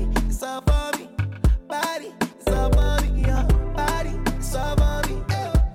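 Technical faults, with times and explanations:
1.79–3.33 s, CD scratch ticks: seven short ticks at a steady rate of roughly four or five a second, the longest only a few milliseconds. A surface blemish passes the laser once per disc revolution, corrupting more data than error correction can restore, so the player briefly interpolates or mutes each damaged stretch.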